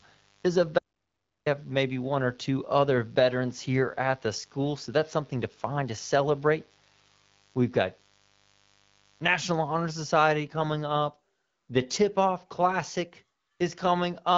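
From the start until 10.07 s, mains buzz runs under the speech. Sharp switching spikes from a dimmer, rectifier or poorly shielded cable get into the signal path twice per cycle of a 50 Hz supply, so harmonics of 50 Hz stack up well into the kilohertz range. The result is a steady, raspy buzz sitting roughly 35 dB below the speech, ending at 10.07 s.

From 0.79 to 1.46 s there is an audio dropout to silence lasting about 0.68 s. The input feed to the recorder or encoder was cut, likely by a momentary disconnection or mute, while writing continued with silence. The speech stops mid-flow and resumes just as abruptly. The gap is silent, with no room tone left, and whatever was said in that stretch is lost.

From 10.46 to 11.88 s comes an AMR rate drop. The link apparently weakened and the network moved the AMR-WB codec to a lower mode, which points to a step down from 12.65 to 8.85 kbit/s, trading coding detail for error protection. 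The bandwidth stays the same and nothing drops out, but the speech turns rougher, buzzier and more synthetic. Clarity comes back once the higher rate is restored at 11.88 s, returning to the lightly coded HD Voice sound heard before.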